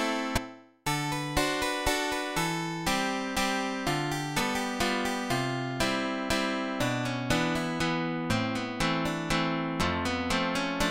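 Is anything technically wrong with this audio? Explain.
Yes. Damaged data in a compressed stream occurs at 0.36 s and 4.39 to 4.41 s: corrupted bytes make the decoder lose frame sync and hunt for the next header, leaving a brief chirp, squawk, click or gap.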